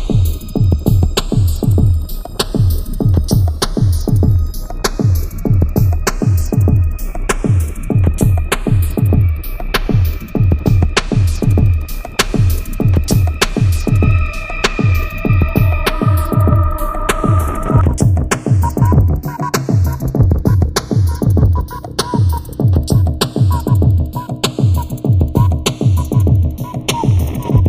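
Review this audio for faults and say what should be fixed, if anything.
Channels drifting apart, throughout the clip: a slow flanging sweep runs from start to end. The two channels appear to come from devices on separate clocks, off from each other by roughly 20 ppm, so the delay between them grows steadily to a fraction of a millisecond by the end. Summed to mono, that sliding offset moves comb-filter notches gradually through the spectrum. To prevent it, lock both devices to a shared word clock or record through a single interface.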